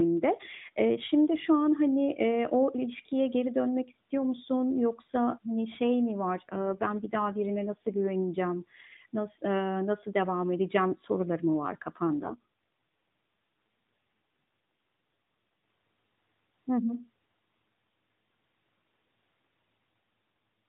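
Speech that turns rougher, buzzier and more synthetic from 6.50 to 8.02 s and again from 12.21 to 15.38 s, with no gap and no change in bandwidth, then returns to its earlier, lightly coded sound, capped at 4 kHz by the narrowband mobile codec. This is an AMR rate drop: the network switched the codec to fewer bits per frame, consistent with a fall from 12.2 to 5.9 kbps, to protect the stream on a weak radio link.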